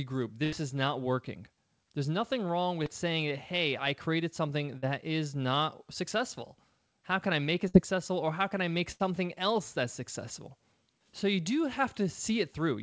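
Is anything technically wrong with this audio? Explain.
Yes, there are dropouts from lost packets on what sounds like a call path, with nothing above 8 kHz.

Four bursts of packet loss hit at 0.44 to 0.54 s (just before "is not working"), 4.78 to 4.84 s (between "hey I created something" and "is not successful"), 7.68 to 7.76 s and 8.92 to 9.02 s. Each time, the receiver stretches the last sound into a fading buzz or hiss, then jumps ahead with a chunk of speech gone.

There's also one short concealed packet loss at 2.84 to 2.88 s, between "nothing wrong" and "saying hey I created." Only about 20 ms went missing. The decoder patched it by extending the preceding sound and blending back in, so you just hear a quick smear or wobble.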